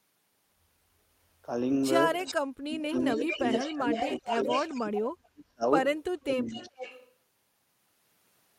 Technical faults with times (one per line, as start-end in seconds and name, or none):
2.24-2.35 echo leak
2.57-3.86 speech suppressed in double talk
2.82-5.29 echo leak
4.20-4.46 speech suppressed in double talk
4.77-5.64 speech suppressed in double talk
6.16-6.82 speech suppressed in double talk
6.48-7.10 echo leak